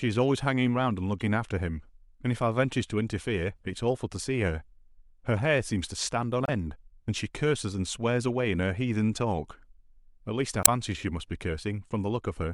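Damaged data in a compressed stream occurs three times in this speech: at 1.20 to 1.22 s, 6.44 to 6.49 s, and 10.60 to 10.68 s. In each spot the compressed bytes are corrupt, so the decoder misreads those frames, loses sync and hunts for the next valid frame header. Each one is a short chirp, squawk, click or hole cutting into the speech, lasting about 20 ms, 50 ms and 80 ms respectively.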